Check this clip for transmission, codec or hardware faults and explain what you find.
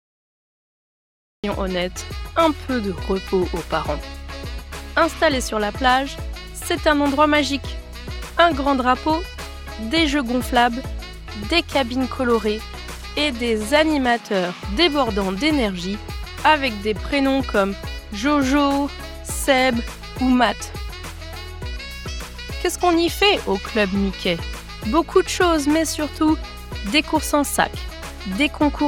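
There's one fault, a cut-off start. The first 1.44 s are digital silence, then the sound jumps in mid-stream with no attack because capture began late.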